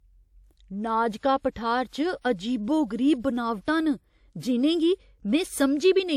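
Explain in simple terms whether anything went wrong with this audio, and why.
Two sharp sounds in this speech clip come out blurry, and that's pre-echo. Just before each one there's a hiss, from about 1.50 to 1.56 s and again from 1.88 to 1.93 s, roughly a twentieth of a second each time. The compression works on short chunks and spreads its noise across each whole chunk, so noise meant to hide under the loud attack leaks into the quiet gap before it. That softens the hit.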